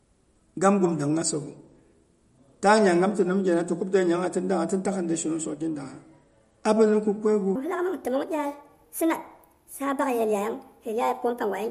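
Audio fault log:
Throughout, MP3 compression: plainly audible watery, swirly artefacts, likely from a low bitrate around 46 kbps starving the encoder.
7.55 to 11.71 s, section at the wrong speed: the speech runs about 1.39 times too fast, raising pitch roughly five semitones, likely from playback against the wrong clock.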